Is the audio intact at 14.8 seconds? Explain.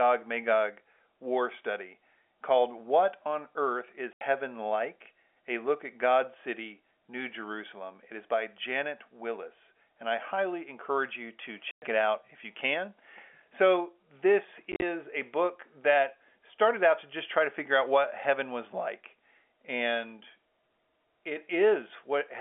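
No. Between 14.72 and 14.82 s, packet loss filled with silence leaves hard-edged holes, about 70 ms in all and none longer than 40 ms, just before "a book".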